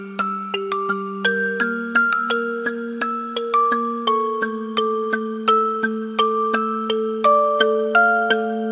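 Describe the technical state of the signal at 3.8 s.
At 3.8 s the signal is intact, with no dropout, clipping, glitch or other technical fault audible at that point.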